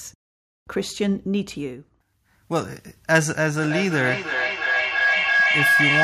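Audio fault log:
3.61–6.04 s, feedback howl: a tone near 1.5 kHz swells to the end, peaking about 4 dB above the speech, with a loop delay of roughly 300 ms, as a microphone-to-loudspeaker loop gains level on each pass and narrows to its favoured frequency.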